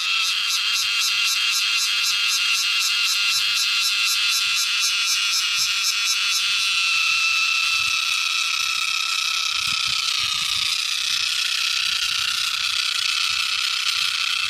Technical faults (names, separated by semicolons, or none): drift correction step